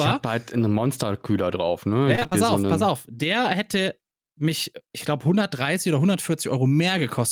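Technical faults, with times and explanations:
2.15–2.33 s, repeated packet loss (robotic sound): just before "auf so pass auf" the speech turns choppy. A burst of short dropouts, none longer than about 19 ms, hits this stretch, and each one gets papered over by stretching out the last bit of sound. That's about 80 ms of patched-in audio against roughly 100 ms lost, so close to half the span is filler.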